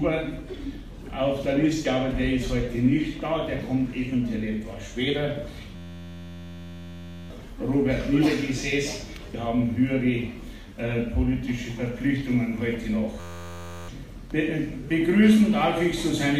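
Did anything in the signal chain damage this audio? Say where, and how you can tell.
Yes. A system hang loop occurs at 5.76 to 7.30 s and again at 13.20 to 13.89 s, in the driver or buffer stage. An 11.61 ms slice repeats exactly, buzzing at 86.1 Hz. That fits a frozen 512-sample ring buffer replaying, which cost about 1.5 s and 0.7 s of audio.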